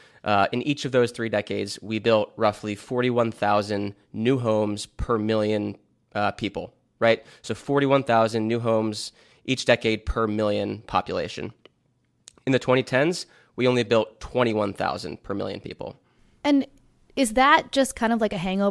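Speech recording, and nothing technically wrong can be heard anywhere in it.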